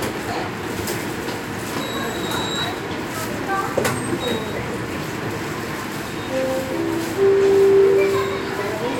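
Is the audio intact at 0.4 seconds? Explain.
Yes, the audio is intact at 0.4 seconds, with no fault at that moment.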